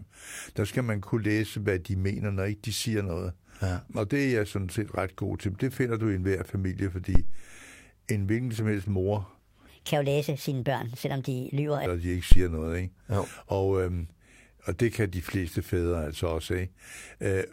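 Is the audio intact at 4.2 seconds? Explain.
Yes, the speech at 4.2 seconds is intact, with no audible fault at that moment.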